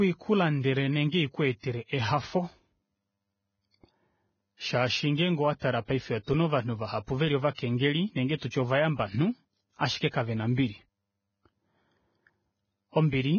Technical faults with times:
0.00-13.39 Vorbis compression
1.60-1.63 pre-echo

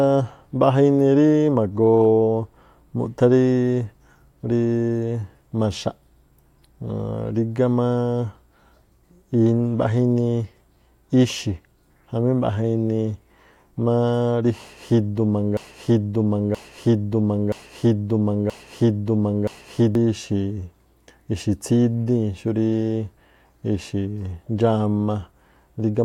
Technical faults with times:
15.57-19.95 broken-record loop

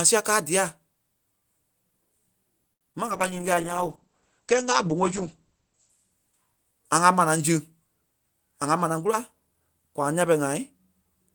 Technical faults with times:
2.73-2.83 short stall from a late packet
2.93-3.09 short concealed packet loss
3.07-6.96 call bitrate drop
8.67-9.61 jitter buffer speed-up

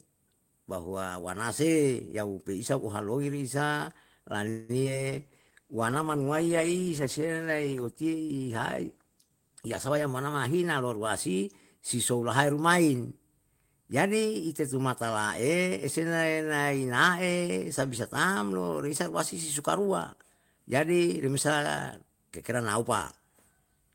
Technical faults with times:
4.49-4.71 call audio freeze
4.83-4.86 short concealed packet loss
5.12-10.12 call bitrate drop
9.50-11.78 jitter buffer speed-up

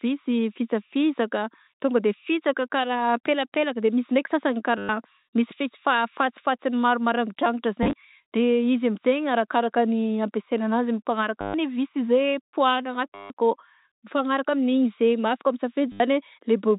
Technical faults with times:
4.78-4.89 packet loss with last packet repeated
7.83-7.93 packet loss with last packet repeated
11.41-11.54 packet loss with last packet repeated
13.15-13.30 packet loss with last packet repeated
15.92-16.00 packet loss with last packet repeated

